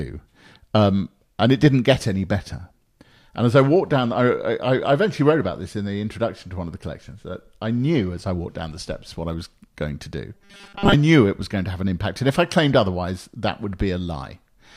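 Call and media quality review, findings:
Robotic sound from repeated short buffers, 10.35–10.94 s: rigid 200 Hz buzz, likely starved playout buffer looping 5 ms chunks, skipping most real audio.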